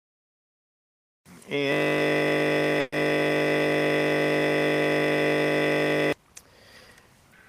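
The audio freezes into a system hang loop from 1.72 to 6.13 s. The system stalled while the sound hardware kept replaying its ring buffer. One 20 ms piece of sound repeats exactly, over two hundred times. Because the repeated piece is so short, it fuses into a steady buzz at 50 Hz instead of a stutter. That buzz is the loop rate. Normal sound returns only at 6.13 s.

A burst of packet loss falls inside this stretch, from 2.80 to 2.93 s. About 120 ms of audio never arrived in time. The receiver filled the gap by extending the last sound and fading it down. A voiced sound becomes a held buzz there, and anything else a fading hiss. No silence is left behind. When playback resumes, the missing 120 ms is simply skipped over.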